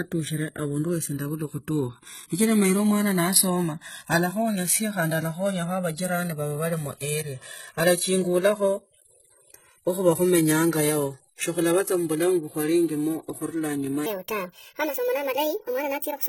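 Throughout the speech there is a slow, sweeping flanging, heard as the two sides are summed to mono. This is channels drifting apart: the sides run on clocks that disagree by roughly 150 parts per million, so their offset creeps to about 3 ms by the end and the comb notches glide.

Also present from start to finish is a dull, smeared top, plus swirly, warbling artefacts of more than one flavour. This is transcoding between lossy codecs, likely a chain of low-bitrate HE-AAC and MP3 passes, each adding its own damage.

From 14.06 s to 16.29 s the speech suddenly turns hurried and chipmunk-high, about seven semitones up. This is a section at the wrong speed, playing at 1.49 times its proper rate, as if fitted to the wrong clock, so pitch and tempo jump together.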